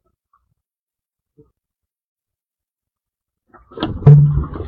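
At 1.68 s, compressed frames are skipped. The audio jumps forward by about a tenth of a second, which fits two missing frames of 46.4 ms each. The frames were absent or rejected by the decoder as damaged. From 4.00 to 4.05 s the same fault recurs. This time about 150 ms goes missing, consistent with three frames.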